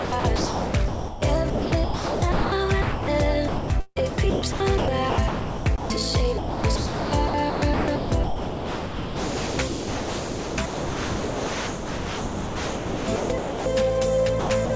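From 0 to 1.22 s and again from 1.50 to 2.52 s, the sender's voice detector likely toggled repeatedly between sending and muting. This is sound chopped by the voice detector. About 0.88 s and 0.8 s of real audio were swapped for comfort noise, so the sound stutters.

From 2.82 to 3.08 s, the detector likely took the signal for background and stopped sending entirely. This is sound dropped by the voice detector. A solid 260 ms of sound gives way to steady comfort noise before the signal returns.

The chopping resumes from 3.48 to 6.00 s, where about 1.34 s is filled with noise. It is at its worst from 6.38 to 13.66 s, with about 6.18 s of that stretch replaced, leaving the sound badly fragmented. A final short burst runs from 14.40 to 14.70 s, with 140 ms lost.

Throughout the clip, nothing is heard above 8 kHz. That fits the G.722 call codec.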